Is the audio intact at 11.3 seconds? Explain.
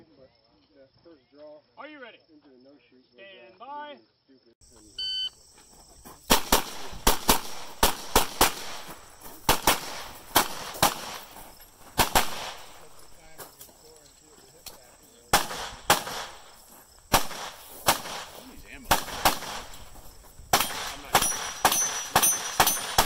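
Yes, at 11.3 seconds the audio is intact, with no dropout, click, distortion or other fault audible at that moment.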